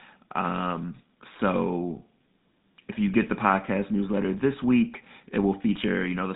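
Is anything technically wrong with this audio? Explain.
Yes. Throughout the speech, the audio carries the damage of the GSM full-rate codec, plainly audible, with a roughness that points to the 13 kbps mobile coder. It models the vocal tract and excites it with regularly spaced pulses that keep only a fraction of the excitation detail, giving a buzzy, gravelly texture. Nothing passes above 3.8 kHz. A spectrogram shows a hard ceiling there with an empty band above, and the harmonics below look smeared and grainy.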